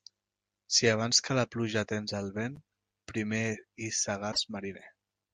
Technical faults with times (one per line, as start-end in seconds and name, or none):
4.29-4.38 damaged data in a compressed stream